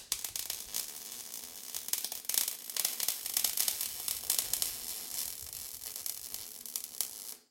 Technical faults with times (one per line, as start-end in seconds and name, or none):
2.89-5.31 doubled audio track